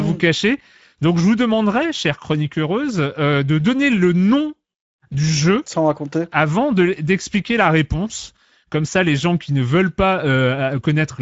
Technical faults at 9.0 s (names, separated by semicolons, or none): Speex codec